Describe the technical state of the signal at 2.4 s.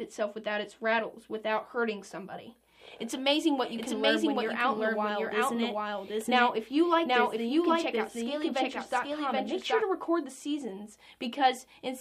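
At 2.4 s the signal is intact, with no dropout, distortion or other technical fault audible at that moment.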